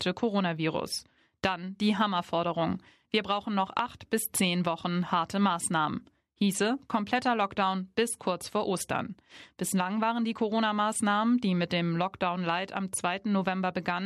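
No technical faults can be heard anywhere in the recording. The speech continues without any audible break or damage.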